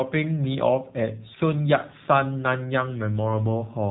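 Throughout, the sound has passed through the AMR narrowband mobile codec, which samples at 8 kHz and rebuilds the voice from a vocal-tract model driven by sparse pulses. Nothing above 4 kHz survives, and the plainly audible buzzy, synthetic quality fits a low rate near 7.4 kbps.

From 1.34 to 1.43 s, AMR bit errors occur. Flipped bits in the less protected parts of the frames, roughly one bit in twenty across about four frames, misplace the driving pulses and skew the finer pitch, gain and spectrum values. The voice holds its pitch and level but turns briefly hoarse, scratchy and gargly.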